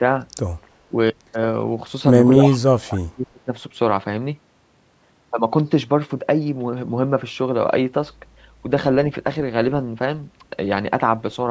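Echo leak at 0.62 to 0.68 s: a very faint copy of the speech comes back 302 ms late. The likely cause is an echo canceller at a loudspeaker end that let some of what its microphone picked up pass back into the call.

Speech suppressed in double talk follows at 0.89 to 0.93 s. The speech dips by about 15 dB for roughly 40 ms. It happens again at 2.35 to 2.39 s as a shallower dip of about 5 dB. The likely cause is the canceller confusing overlapping talk with echo and turning both down.

At 2.43 to 2.58 s the echo leak returns much stronger, only about 10 dB below the speech and still trailing by 302 ms.

From 2.58 to 3.49 s the suppression is at its deepest, pulling the speech down by as much as about 35 dB for nearly a second.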